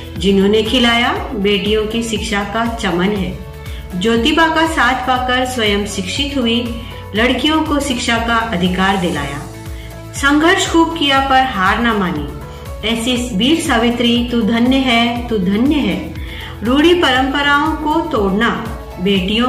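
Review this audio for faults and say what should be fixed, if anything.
Nothing here needs fixing; it all sounds fine as it is, with no faults to chase down.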